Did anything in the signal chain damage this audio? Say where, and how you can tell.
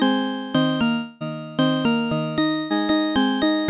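Yes. The damage sits in the network stage, with a long network dropout from 0.92 to 1.23 s. For about 0.28 s the sound is stretched into a fading buzz that never reaches silence, and it resumes with that stretch missing. The likely cause is no packets arriving, with the receiver extrapolating the last sound.

Short concealed packet loss occurs at 1.27 to 1.34 s and again at 2.51 to 2.58 s. Each is a brief smear lasting a few hundredths of a second, where roughly 40 ms of audio failed to arrive and the decoder synthesised a continuation before blending back into the real signal.

A burst of packet loss follows at 2.59 to 2.73 s. About 120 ms of consecutive audio is lost, and the held sound decays as the gap lengthens before the sound picks up further along. The nothing-above-4 kHz band limit points to a G.711 call codec, not this damage.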